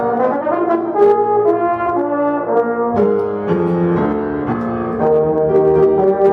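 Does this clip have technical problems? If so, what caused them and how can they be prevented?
No, there are no technical problems to report here.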